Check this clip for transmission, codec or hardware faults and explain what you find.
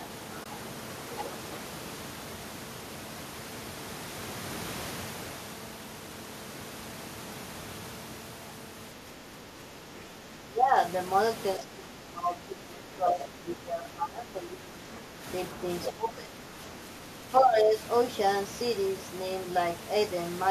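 Three kinds of fault turn up: a brief muted dropout near the start, repeated dips in the talker's level, and two short scraps of a second voice.

AAC frame loss with muting, 0.44 to 0.46 s: the sound fades to a soft-edged silence for about 20 ms and fades back. The decoder lost what fits two frames and filled them with silence. The overlapping windows smooth the edges into a fade rather than a hard cut.

Speech suppressed in double talk, 9.02 to 10.76 s, 11.57 to 15.23 s, 15.92 to 16.54 s and 17.40 to 17.75 s: the talker's level sinks by about 10 to 15 dB, deepest in the second and third stretches. The likely cause is an echo canceller ducking everything while both sides spoke at once.

Other side's voice leaking through, 13.20 to 13.25 s and 15.84 to 15.92 s: a fragment of another voice sits about 10 dB and then about 5 dB below the talker. It is likely loudspeaker playback that the echo canceller failed to remove from the microphone.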